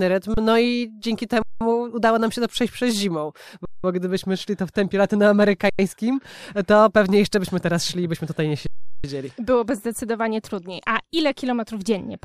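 Speech with five underruns with held sample, where the output ran dry and the converter held its last value. The sound freezes flat at 0.34 s for 30 ms, at 1.42 s after "i dzięki" for 186 ms, at 3.65 s after "to przejść przez zimą" for 186 ms, at 5.70 s for 93 ms, and at 8.67 s after "i byśmy tutaj nie" for 372 ms. Each time it resumes softly where it stopped, with no audio lost. The last four gap lengths are whole multiples of 4096 samples.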